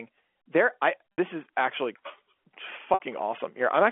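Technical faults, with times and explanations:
1.13–1.18 s and 2.94–3.00 s, packet loss with pitch repetition: around 60 ms of audio goes missing each time, which fits three lost packets, and the receiver fills the gap by looping the last pitch period. The result is a brief held, buzzy tone, the first just before "is actually", rather than a repeated chunk of speech. The telephone band is audible throughout, cut off at 3.4 kHz.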